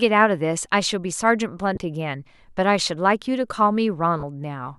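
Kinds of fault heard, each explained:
Lost LE Audio frames: twice the speech briefly turns into a hissy smear, at 1.75 s for 20 ms and at 4.20 s for 30 ms. Bluetooth frames went missing, consistent with 10 ms LC3 frames, and the decoder filled each gap by repeating the previous spectrum with randomised signs.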